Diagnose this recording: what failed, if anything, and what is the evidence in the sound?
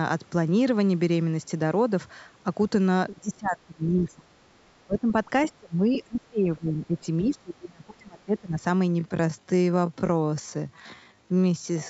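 Call processing failed in double talk. The speech dips sharply four times: 3.15 to 4.27 s, by about 20 dB; 4.86 to 5.08 s, by about 15 dB; 5.57 to 7.03 s and 7.23 to 8.63 s, by about 30 dB each. It fades and cuts out in pieces. The pattern is speech suppressed in double talk. The likely cause is an echo canceller that could not tell the talker from loudspeaker echo, so it turned everything down while both sides spoke.

The same stage left a brief trace of the other side's voice leaking through, from 5.42 to 5.48 s. It sits about 20 dB below the talker. It is a short scrap of a second voice between suppression dips. The likely mechanism is residual echo. The far end played from the loudspeaker, reached the microphone, and the canceller failed to subtract all of it.

From 8.90 s to the end, the pace suddenly slows to about 0.62 times the original speed. The pitch does not drop. The audio drags. 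This is a time-stretched section. It was likely applied after capture by editing or playback software stretching the audio to a longer duration. That software repeats short slices to keep pitch constant.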